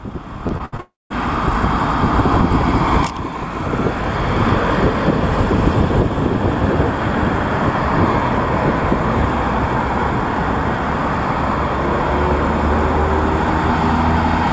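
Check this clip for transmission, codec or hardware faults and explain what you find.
Two transmission faults sit back to back near the start, both from network loss on a call path whose audio stops at 8 kHz, consistent with G.722 at 64 kbps.

From 0.48 to 0.80 s the audio turns choppy, with short pieces missing. This is repeated packet loss (robotic sound). Four gaps, the longest 67 ms, follow one another in quick succession. The receiver patches each by stretching the last audio it had, so about a third of this stretch is synthetic fill rather than real signal.

From 0.80 to 1.12 s the audio drops out entirely: a brief fading buzz, then roughly 0.19 s of near-silence before sound returns with that section gone. The likely cause is a long network dropout. For about 0.3 s nothing arrived, and the concealment could only extend the last fragment briefly before giving way to quiet.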